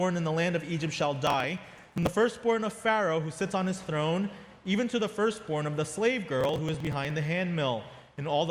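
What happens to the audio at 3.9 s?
Nothing goes wrong at 3.9 s: the audio plays through that moment cleanly, with no dropout, click, glitch or other fault.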